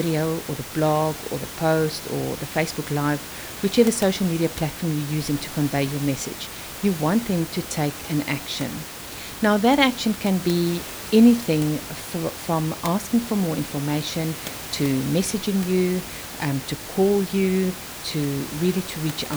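No technical faults are audible.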